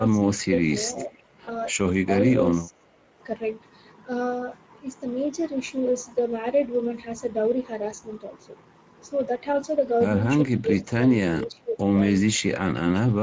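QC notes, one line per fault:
throughout: Speex codec, a grainy, hoarse roughness at 16.8 kbps from a starved excitation, constant through the clip rather than tied to moments like dropouts.
0.0 to 0.52, 1.04 to 1.11, 2.68 to 2.86, 10.61 to 11.01, 11.46 to 11.87, 12.9 to 12.97: speech suppressed in double talk. The level dips by up to roughly 20 dB, likely from an echo canceller ducking during crosstalk. It sounds like level loss, not buzzy concealment.
0.95 to 1.18: echo leak, a copy trailing about 473 ms behind, about 15 dB down, likely from loudspeaker pickup. It is a repeat rather than a dip.
1.45 to 1.61: VoIP packet loss concealed by the speech codec. One 20 ms gap is filled with a fading extrapolation, and weakness or distortion lingers after packets return.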